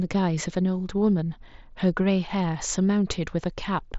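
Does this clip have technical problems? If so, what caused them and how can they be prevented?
No, the speech arrives through a Bluetooth mSBC headset link at about 61 kbps, with the band ending near 7.7 kHz as that wideband codec dictates, so nothing needs fixing or preventing.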